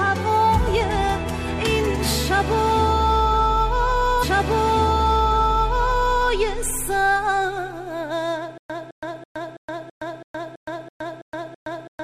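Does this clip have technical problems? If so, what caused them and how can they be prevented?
Yes. A stream segment is repeated from 4.18 to 6.18 s. About 2.0 s of audio plays a second time, with a small blip where playback jumps back, because the player fetched or queued the same segment twice and played both copies in sequence. Tracking segment sequence numbers and discarding duplicates before they reach the playback queue would prevent it.

A stutter with silent gaps runs from 8.58 s to the end. A 0.21 s burst returns ten times at a steady 0.33 s pace, separated by 0.12 s of digital silence, and the audio that should have filled that stretch is lost. This is likely a stalled stream, with each retry replaying the last buffered fragment before running dry. A deeper playback buffer, and recovery that waits for fresh data instead of looping the old fragment, would prevent it.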